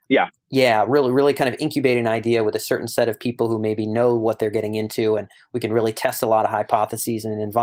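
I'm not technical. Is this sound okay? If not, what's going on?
Yes, this sound is okay, and nothing is going wrong with it.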